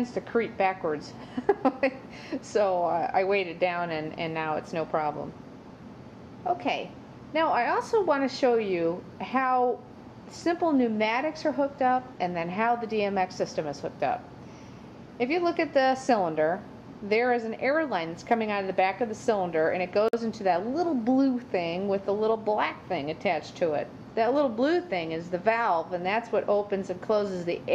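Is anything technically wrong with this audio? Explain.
Yes. At 20.08 to 20.13 s there is a gap at a join of encoded pieces: a silence of about 49 ms breaks continuous sound. The audio was likely encoded in separate segments and spliced without trimming, so one run's padded final frame and the next run's start-up delay both remain. On a waveform it shows as a flat dropout with smeared edges; a spectrogram shows a thin, full-height blank column, after which the sound resumes where it stopped.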